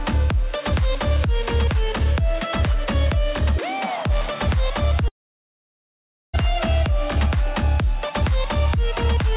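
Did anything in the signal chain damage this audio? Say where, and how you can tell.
Yes, at the network stage. At 5.08 s the sound smears into a short fading buzz, then sits silent until 6.35 s and resumes with about 1.26 s gone. This is likely a long network dropout, with the receiver's concealment giving up and muting.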